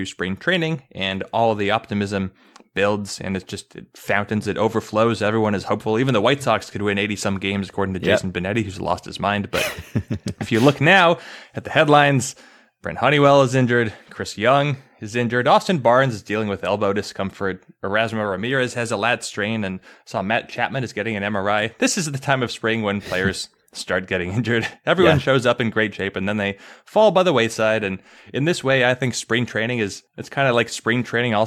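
Nothing technically wrong turns up anywhere in this speech recording, so there's no fault to point to, no time to flag and no cause to explain.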